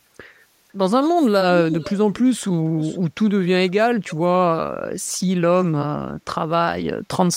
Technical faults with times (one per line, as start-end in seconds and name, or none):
1.69-1.96 echo leak
2.78-2.99 echo leak
4.09-4.15 echo leak